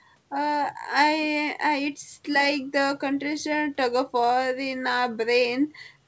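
Nothing goes wrong in this speech, and the way the top end stops at about 8 kHz is just the ordinary ceiling of a wideband call path, which fits a G.722 codec.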